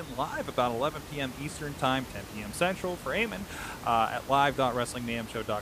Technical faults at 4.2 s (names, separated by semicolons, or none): none